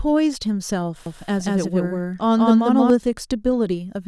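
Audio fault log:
1.06–2.90 s, doubled audio track: the speech is joined by a full-band copy trailing around 200 ms behind at roughly equal level, likely from a slower second capture path. Unlike echo, it has no decay or room colour and starts and stops abruptly.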